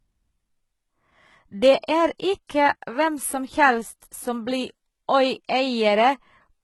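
From the start and across the whole speech clip, the treble sounds synthetic, with s sounds turning gritty and lispy and nothing at all above 11.8 kHz. That is HE-AAC compression, likely at a bitrate around 16 kbps. Copied low bands are standing in for real highs, which is why the top stays bright but out of step, unlike the plain dull top of a low-pass filter.

Pre-echo appears at 1.81 s and again at 2.47 s. A hiss rises for 27 ms and 23 ms before sharp attacks as codec noise leaks ahead of the onset. Because it comes before the attack and blurs it, it is distinct from a click or a reverb tail.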